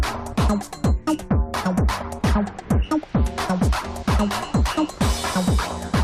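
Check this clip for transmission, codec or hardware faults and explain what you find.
One fault is present. Damaged data in a compressed stream occurs at 2.87 s. Part of the encoded data there was corrupted, so the decoder misread or rejected those frames, lost sync and had to search for the next valid frame header. This produces a brief glitch, about 14 ms long, in the audio.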